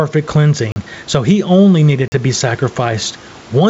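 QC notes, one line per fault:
throughout: gain pumping. The gain swings by roughly 10 dB. Loud and quiet passages sit close in level and the speech sounds squashed. The likely cause is input gain set far too high, with a fast limiter pulling it back down.
0.72 s and 2.08 s: block of digital silence. Each is a 40 ms hole where the audio drops out and returns with no fade. This fits an output buffer that was not filled in time.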